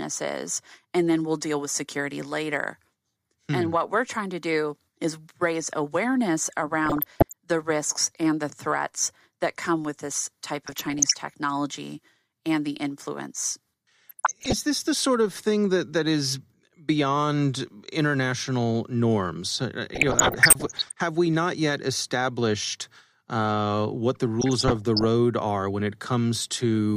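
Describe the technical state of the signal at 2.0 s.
At 2.0 s the speech signal is intact, with no technical fault present at that moment.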